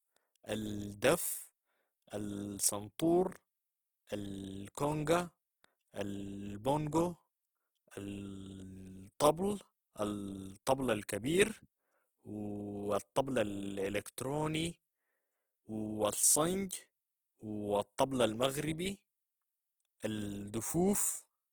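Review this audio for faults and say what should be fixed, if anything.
Opus compression runs throughout the clip, likely from a low-bitrate encode in its CELT music mode. Band energies survive, but missing detail is filled by folding or noise, so the speech sounds rough, grainy and noisy even with full bandwidth to 20.1 kHz, which fits a 16 kbps rate. Encode at a higher bitrate to prevent it.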